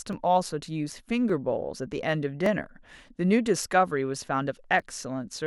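From 0.13 s to 4.80 s the speech carries a regular click roughly every 1.17 s, about five in all. These are clock drift buffer slips, likely from two devices running on separate clocks that disagree by something like a thousand parts per million, so a buffer periodically drops or repeats a few dozen samples. On a spectrogram each slip shows as a thin vertical broadband line; the waveform shows a sudden step or discontinuity at each one.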